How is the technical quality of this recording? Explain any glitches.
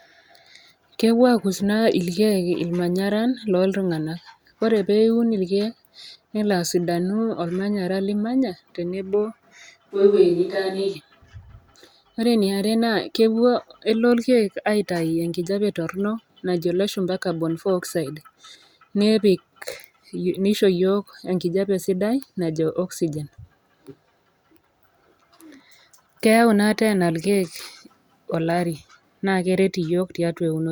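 There is one glitch, a brief switch to a distant microphone. From 9.93 s to 10.94 s the speech suddenly turns roomy and hollow, losing its low end, then snaps back just as abruptly. The level stays about the same, and background noise remains low, roughly 40 dB under the speech. The likely cause is that the close microphone's signal dropped out for that second, leaving only a farther pickup such as a camera microphone, which hears more of the room's reflections and less of the voice's body.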